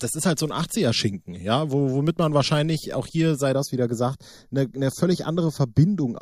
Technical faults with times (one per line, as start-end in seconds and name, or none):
3.52-6.22 channel delay (comb filtering)